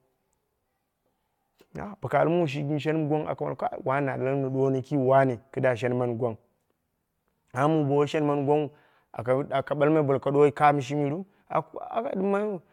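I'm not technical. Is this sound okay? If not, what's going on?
Yes, nothing in this recording stood out as a problem when listening to it.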